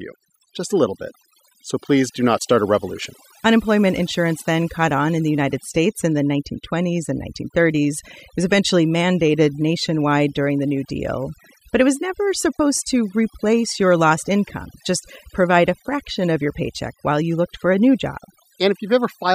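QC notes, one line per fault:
throughout, overdone noise removal: the noise reduction on this speech was pushed far too hard, so any frequency band that sits close to what the tool judged as noise gets pulled right down or switched off, and the softer parts of the voice get swept away along with the noise. That's why the gaps between phrases drop to near silence with little twinkling specks.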